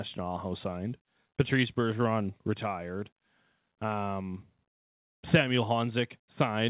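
The sender's clock runs about 2% slow against the receiver's, a clock drift between sender and receiver that persists for the whole clip. The jitter buffer keeps draining, so playback gets slightly ahead of the incoming audio.

From 0.23 s to 6.53 s, repeated timing corrections fill the gap: the receiver keeps repeating short slices of audio at irregular intervals, adding roughly 150 ms over the stretch. The speech plays at about 98% of normal speed, all heard through the G.711 call codec's band limit at 4 kHz.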